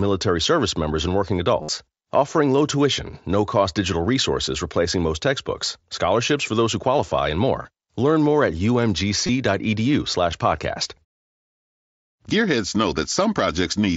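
Speech over a Bluetooth headset's wideband mSBC link loses voice packets, and the receiver repeats recent waveform to fill them (concealed Bluetooth headset packet loss). After "service members and working", 1.62 to 1.69 s holds a buzzy 60 ms tone. Briefer patches fall at 3.75 s, 7.62 to 7.65 s, 9.27 to 9.29 s and 10.32 s.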